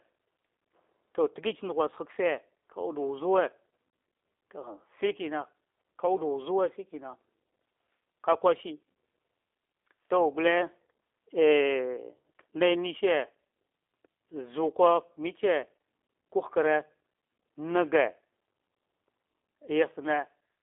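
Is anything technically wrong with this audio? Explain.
Yes. Throughout the speech, the sound carries G.729 codec damage, and it is plainly audible. The codec rebuilds each 10 ms frame from a vocal tract filter, a pitch predictor and a few pulses, which fits an 8 kbit/s G.729A stream. Only about 300 Hz to 3.6 kHz gets through, so it sounds thin and boxy, with a rough, buzzy, synthetic edge. A simple telephone-band filter would be narrow but still smooth; the roughness comes from the coding.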